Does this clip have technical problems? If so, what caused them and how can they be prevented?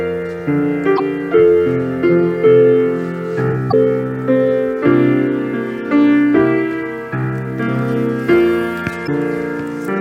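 Yes. Three short bursts of damaged data in a compressed stream occur at 0.95–1.00 s, 3.69–3.74 s and 9.04–9.09 s, each about 50 ms long. At these points bytes in the encoded stream were lost or overwritten, so the decoder misread the affected frames and had to resynchronise on the next valid frame header. Each event is heard as a brief chirp or blip. Prevention: carry the stream over a checksummed, error-corrected transport and verify file integrity after every transfer.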